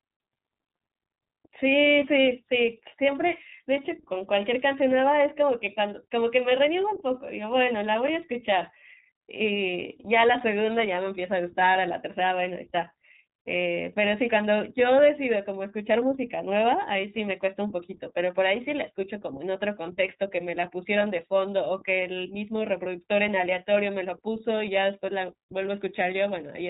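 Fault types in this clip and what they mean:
iLBC codec: a narrowband VoIP codec that encodes each frame's excitation independently of the previous frame, so a lost frame does not smear into the next one. Here the audio is band-limited with nothing above about 3.8 kHz, and the speech has a plainly audible rough, slightly synthetic quality. The 30 ms framing and the coarse excitation detail point to the 13.33 kbps mode. The damage persists across the entire clip.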